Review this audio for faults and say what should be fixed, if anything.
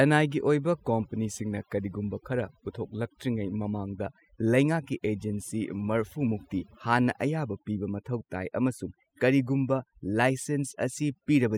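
Overdone noise removal runs through the whole recording. Between phrases the background drops to near silence dotted with twinkling specks. During speech, bands near the estimated noise floor are pulled down along with the hiss, taking quieter vocal detail with them. Low-bitrate codec swirl is similar, but here the artefacts sit on the noise floor and gaps rather than colouring the whole signal. To prevent it, apply gentler reduction strength.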